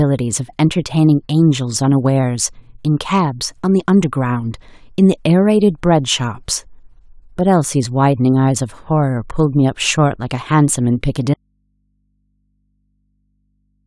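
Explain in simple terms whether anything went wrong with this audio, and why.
At 11.34 seconds the speech suddenly cuts out and never comes back, leaving only a faint, low mains hum until the clip ends. This is an audio dropout to a faint residue. The change is instant, not a natural pause or a gentle fade. The likely cause is that the signal feeding the recording was lost while the recording chain kept running, so the open input picked up hum at a level far quieter than the speech.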